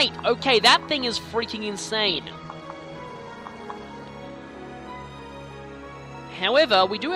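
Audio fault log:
2.08–4.08 s, adaptive stream at a lower bitrate: the treble suddenly stops near 12.1 kHz and codec artefacts thicken, with no gap at either edge, as the player switched to a lighter version of the stream, which points to Opus dropping from around 64 to 12 kbit/s.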